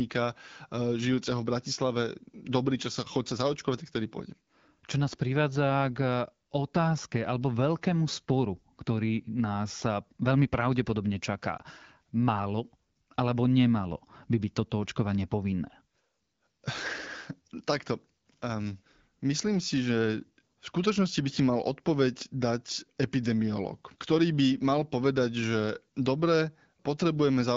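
At 11.57 to 11.62 s there is a lost AMR speech frame, consistent with a single 20 ms frame failing its checksum. The AMR-WB decoder, running at 12.65 kbit/s, bridges the gap by repeating its last pitch and vocal tract parameters at reduced gain, producing a brief dip or warble.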